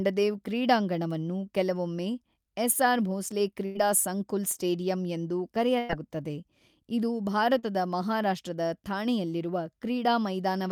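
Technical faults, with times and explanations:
3.65–3.77 s and 5.79–5.91 s, burst of packet loss: in each case about 100 ms of consecutive audio failed to arrive in time to be played. The receiver bridged the hole by extending the last received sound for roughly 90 to 100 ms and fading it down, so each gap is heard as a stretched, decaying continuation of the preceding sound. The audio then picks up further along, with that tenth of a second absent.
4.53–4.57 s and 7.59–7.65 s, short concealed packet loss: brief dropouts of 20 ms and then 40 ms missed the decoder. Each was filled by carrying the previous sound forward, from its pitch if voiced or as shaped noise if not, before blending back into the real signal. The result is a quick smear or wobble rather than a gap.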